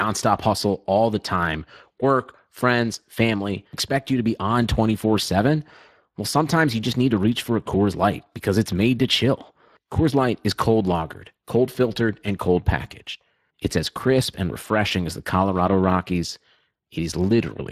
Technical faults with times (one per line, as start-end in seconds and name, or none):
0.00-17.72 Speex codec